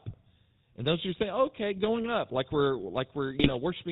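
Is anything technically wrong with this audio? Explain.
Yes. The speech has two technical faults.

Throughout the clip, the sound carries the GSM full-rate codec. Its coloration fits the 13 kbps full-rate coder. The codec models the vocal tract as a filter. It excites that filter with evenly spaced pulses and keeps only a third of the excitation samples. Everything above 4 kHz is lost. The result is a plainly audible buzzy, gravelly roughness over the voice, with a dull, band-limited top end.

From 3.34 to 3.51 s there are GSM bit errors. Corrupted bits reached the decoder during this short stretch. The damage fits about eight hit 20 ms frames and points to roughly 1.5 percent of bits flipped. Wrong filter, pitch or gain values bend the spectrum and throw the level off frame by frame. The voice briefly breaks into squawks, pops and gargling.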